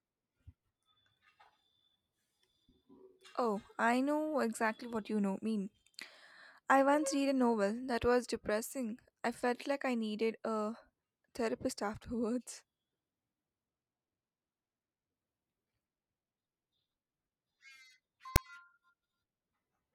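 At 18.36 s the speech is interrupted by file tags played as audio: a block of text metadata, followed by zero padding, decoded as samples. It gives a brief hard-edged rasp, then dead silence. The waveform shows a lopsided, offset burst and a flat silent stretch, and the spectrogram shows a full-band vertical stripe.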